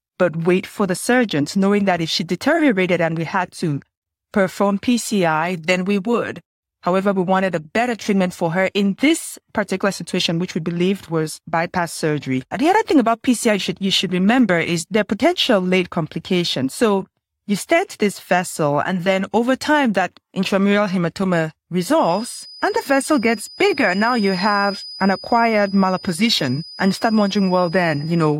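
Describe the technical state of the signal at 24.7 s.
At 24.7 s the signal carries a feedback whistle, present continuously from 21.94 s to the end of the clip. It is a thin, steady tone at 5 kHz sitting well below the speech, swelling and fading slowly in level rather than growing. The likely cause is a loudspeaker-to-microphone path running just at the edge of instability: loop gain near unity at 5 kHz sustains that one frequency without letting it build into runaway howl.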